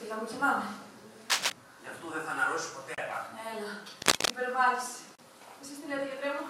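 Cable scratch noise breaks in from 1.30 to 1.52 s and again, louder, from 4.02 to 4.30 s. Both bursts rasp above the sound. A worn connector being moved is likely.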